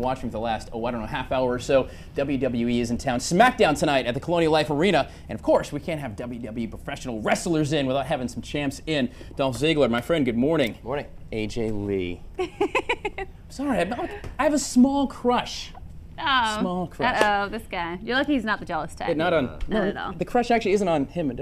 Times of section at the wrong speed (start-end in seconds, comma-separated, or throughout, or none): none